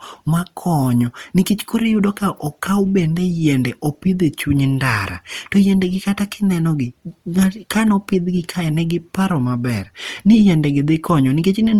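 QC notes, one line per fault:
Throughout, Opus compression: the speech comes across grainy and plainly rough, with a noisy fizz where the harmonics should be clean, though the top end still reaches about 20 kHz. That's likely Opus in its music mode running short of bits, consistent with roughly 24 kbps.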